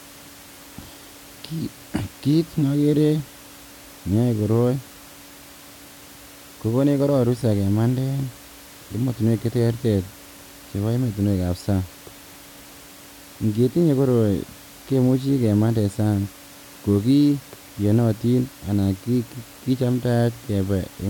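Nothing goes wrong anywhere in this speech recording, and the only thing underneath it is some gentle room noise sitting about 23 dB below the speech, which is just part of the space the microphone was in.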